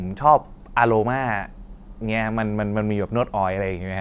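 Nothing goes wrong anywhere in this bit of speech, so there's simply no fault to point to.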